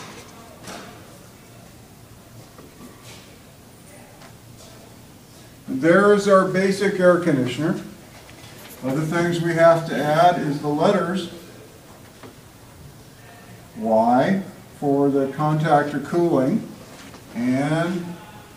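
Nothing technically wrong turns up anywhere in this audio, so there are no times or causes to report.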